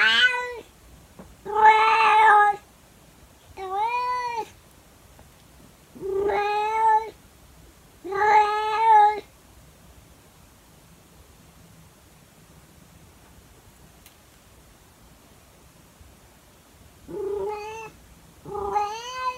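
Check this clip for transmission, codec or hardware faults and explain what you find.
No transmission, codec or hardware faults turn up anywhere in this clip.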